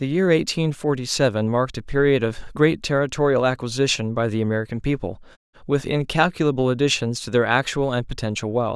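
A speech recording with nothing technically wrong to point at, just the background dropping to quiet in the pauses and coming right back in time for the next phrase, which is how it's meant to behave.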